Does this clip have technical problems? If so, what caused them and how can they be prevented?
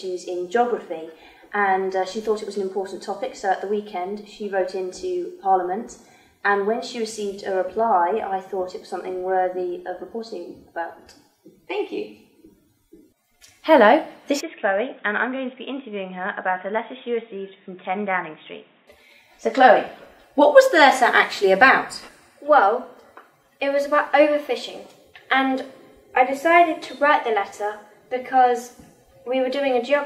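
Yes. From 14.41 to 18.87 s the sound turns dull, with nothing above 3.8 kHz, drops about 10 dB and picks up new background noise roughly 35 dB down. That's likely the input switched to a poorer device. Pin the input device in the system settings and disable automatic switching before recording.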